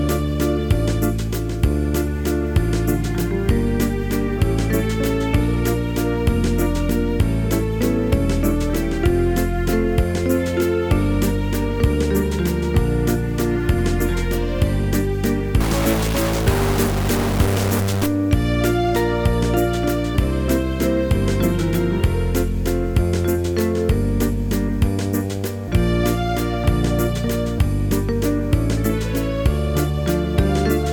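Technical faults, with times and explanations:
15.61 to 18.06 s, stuck bit: for about two and a half seconds the sound turns harsh and buzzy, with a gritty layer over everything. The likely cause is one data bit held at a fixed value, so roughly half the samples are shifted by that bit's weight, a step of around -20 dBFS that points to a fairly high bit. The error tracks sample values rather than loudness, so quiet moments fill with noise too.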